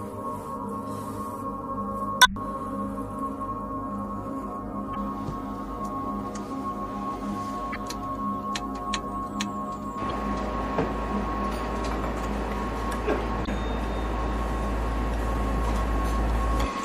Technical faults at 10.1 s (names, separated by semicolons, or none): MP3 compression; damaged data in a compressed stream